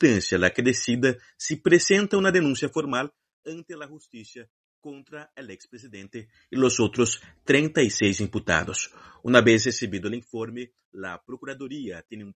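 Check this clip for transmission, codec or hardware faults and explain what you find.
One fault stands out: zipper noise from 2.51 to 3.72 s. While the level drops by roughly 20 dB, a fast ticking rides on the sound at about ten clicks a second. The gain is stepping down in unsmoothed 2 dB jumps, and each abrupt jump leaves a small discontinuity in the waveform.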